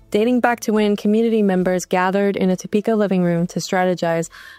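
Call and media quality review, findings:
Sample clock jitter, throughout. Fine hiss and roughness riding on the sound, strongest on loud and bright passages, absent in silences. Probable component: converter clock. Random timing error of roughly a few microseconds, error about 35 dB below signal, growing with waveform slope. Unlike a steady noise floor, the hiss tracks level and brightness and vanishes when the sound stops.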